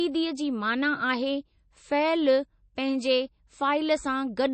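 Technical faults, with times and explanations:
Throughout, MP3 compression: the speech is dull, with nothing above 8.3 kHz, and coding damage is plainly audible, which fits a low bitrate around 32 kbps. The likely cause is an encoder starved of bits, which cut the treble and dropped weak frequency content. A spectrogram shows a flat ceiling at 8.3 kHz.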